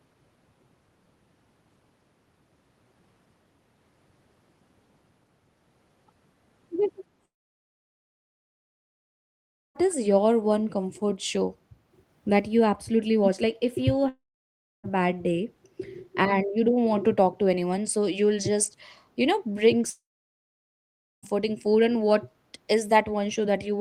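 This speech clip drops out three times, at 7.25 to 9.77 s, 14.09 to 14.86 s and 19.90 to 21.25 s. Each gap is a likely long network dropout. The last sound smears into a brief fading buzz, then goes silent. The silences last about 2.5 s, 0.65 s and 1.2 s. The speech resumes afterwards with the missing stretch simply gone, roughly 2.5 s, 0.76 s and 1.3 s of it.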